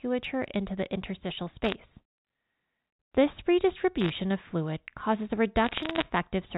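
Right after "into the interstitial", from 1.64 to 1.75 s, bit errors on a digital phone line throw in a burst of sharp ticks. Flipped bits on the G.711 mu-law line each corrupt one sample, and sign or high-order hits tick sharply over the speech. It happens again from 4.01 to 4.10 s, just before "of fluid causes a", and in a longer stretch of crackle after that phrase, from 5.64 to 6.02 s. The error rate in each burst is under one percent.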